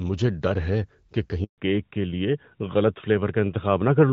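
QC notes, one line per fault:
1.44 to 1.58 s, handover gap: the speech drops out for 140 ms. The sound dies away within a few tens of milliseconds and stays silent until 1.58 s, when the new link starts. This is a call being passed from one network link to another. No speech frames reach the listener while the switch is under way, so whatever was said in that window is lost rather than delayed.
1.58 s to the end, fallback to narrowband: immediately after the gap, everything above 4 kHz disappears for the rest of the clip. Up to this point the audio carries the lightly coded HD Voice band, which fits AMR-WB at around 12.65 kbit/s. After the switch, sibilants and breath lose their brightness and the speech turns duller and rougher. The cutoff points to a narrowband codec such as AMR-NB at 12.2 kbit/s taking over on the new link.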